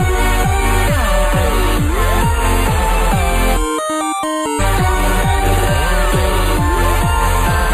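Channel delay (comb filtering) runs throughout: one channel lags the other by roughly a tenth of a millisecond, so the mono sum cancels around 5 kHz, giving a hollow, phasey sound. Damaged data in a compressed stream appears at 4.55 to 4.61 s, where the decoder loses sync on corrupted frames and produces a brief glitch before recovering.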